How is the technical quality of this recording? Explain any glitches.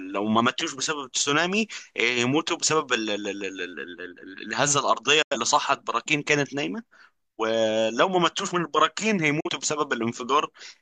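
The speech has two brief digital broadcast dropouts, at 5.22 s and 9.40 s. In each, the sound fades out over about 8 ms into silence and returns after about 0.15 s and 0.09 s. The receiver muted on failed frames (likely two, then one) until clean data resumed.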